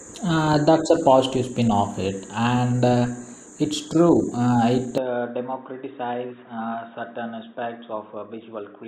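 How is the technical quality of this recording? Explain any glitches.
The recording has one clear glitch. From 4.98 s to the end, the speech suddenly turns dull and boxy, with nothing above 3.8 kHz, drops in level by roughly 5 dB, and gains a faint new background noise sitting around 45 dB below the speech. The change is instant, with no gap. This points to the input switched to a poorer device, likely a narrower-band microphone or headset call profile with its own tone, gain and noise.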